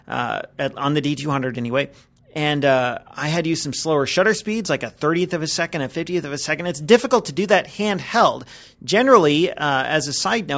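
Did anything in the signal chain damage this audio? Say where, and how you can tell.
No, nothing in the chain has left an audible mark on this audio at any stage.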